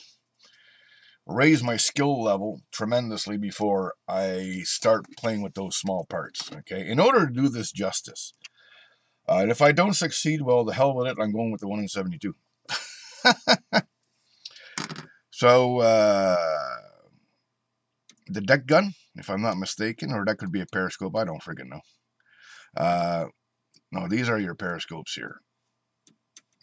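No technical faults can be heard anywhere in the audio.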